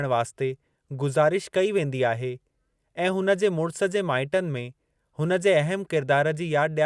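Nothing in this speech recording stands out as a technical fault at any point, so there's nothing to flag here.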